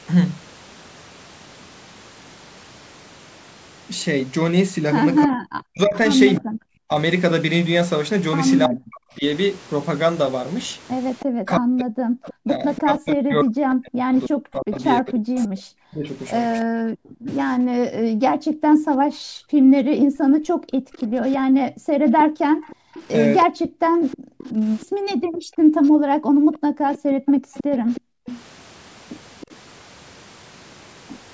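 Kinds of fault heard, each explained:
Speech suppressed in double talk: The speech dips sharply, as much as roughly 40 dB, in pieces between 5.25 and 16.88 s, about five seconds in all, and again briefly at 23.45 to 23.63 s. The likely cause is an echo canceller that could not tell this talker from loudspeaker echo while both sides spoke.
Echo leak: A faint delayed copy of the speech trails the original by 318 ms, at about 15 dB below it. It runs from 11.19 to 17.32 s and from 20.93 to 29.55 s. This is likely loudspeaker sound that the loudspeaker side's echo canceller failed to remove.
Background gated by the echo canceller: From 17.16 to 28.26 s, the room sound drops away by up to about 40 dB, roughly seven seconds in total. The echo canceller pulled the microphone down hard while the loudspeaker played, then released it.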